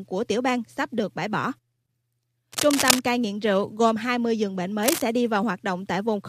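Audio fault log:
2.52–3.00 s and 4.82–5.02 s, cable scratch noise: dense, uneven rustling bursts just before "cai nghiện rượu" (roughly as loud as the speech) and just after "giường bệnh" (a little quieter). This is likely a worn contact being moved. Unlike a single click or a dropout, the scratching is clustered and the speech continues beneath it.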